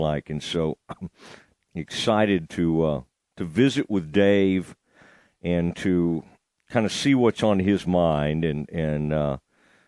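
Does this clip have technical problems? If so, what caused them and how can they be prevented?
No, there are no technical faults to be heard in this speech clip. With nothing going wrong in it, there is no cause to trace and nothing that needs preventing.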